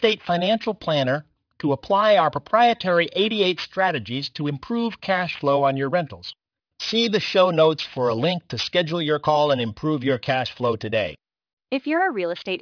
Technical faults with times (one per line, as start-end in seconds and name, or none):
0.00-12.61 aliasing